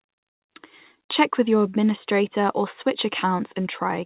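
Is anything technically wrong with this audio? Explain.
No, nothing is technically wrong with this audio; the speech simply stops at 4 kHz, which fits a G.711 call path.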